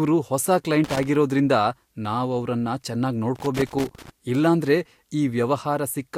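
Loose connector crackle breaks into the speech from 0.84 to 1.08 s and again, for longer, from 3.36 to 4.10 s. A worn or dirty contact somewhere in the cable path is making and losing connection as it shifts, chopping the signal into an irregular scratching burst. That randomness sets it apart from digital dropouts or buffer clicks, which are abrupt, clean gaps or clicks rather than sputtering unevenly.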